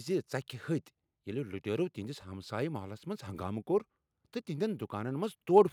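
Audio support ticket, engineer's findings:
No faults found in this speech recording.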